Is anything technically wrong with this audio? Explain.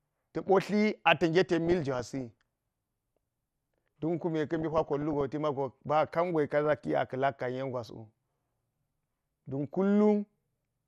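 Yes, two problems. Throughout, the speech sounds dull and granular with a gurgly edge, likely heavy MP2 compression at a rate around 80 kbps, starving upper sub-bands of bits.

On top of that there's DAB burbling at 1.53–2.31 s, 4.56–5.21 s, 6.65–6.86 s (right after "ba kangi ka") and 8.55–9.10 s. Reception errors corrupt sub-band samples, giving short blips of noise in single sub-bands.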